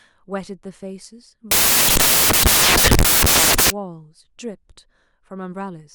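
From 1.51 s to 3.70 s the speech is replaced by loud, harsh broadband noise, the sound of samples built from the wrong bytes. The reader has assembled each sample from misaligned or swapped bytes, so the rapidly changing low-order bits end up as the dominant part of each value. Unlike added background hiss, which sits under audible speech, this noise takes the place of the speech itself.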